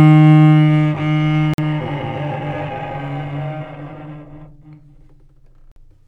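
Sounds; corrupt frame muted at 1.54 s (60 ms) and 5.72 s (76 ms, fitting two frames): the decoder rejected damaged frames and substituted abrupt silence, timing intact.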